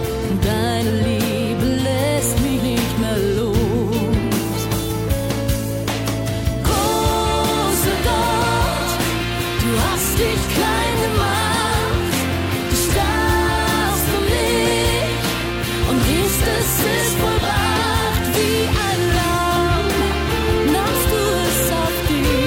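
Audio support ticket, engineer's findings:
No audible faults found.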